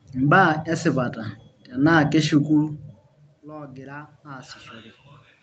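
From 3.43 to 4.61 s, automatic gain rising is heard. The input had dropped by about 21 dB, after the talker moved away at around 2.5 s. The gain control slowly added about 4 dB. Speech and room noise swell together.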